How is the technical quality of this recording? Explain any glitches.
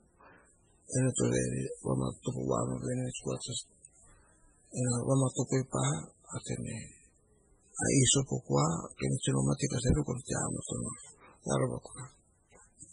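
Quality is poor: the recording carries heavy damage throughout, likely from MP3 compression at a very low bitrate, around 16 kbps. Starved of bits, the encoder discards weak frequency lines that flicker frame to frame and removes everything above 10.4 kHz, leaving the speech watery and swirly, with smeared attacks.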